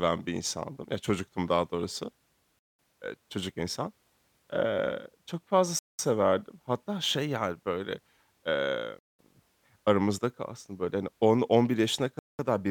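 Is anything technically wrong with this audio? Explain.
Yes. Gaps between chunks at 2.59, 5.79, 8.99 and 12.19 s: the speech arrives in segments that fit 3-second chunks, and each join leaves a 200 ms silence.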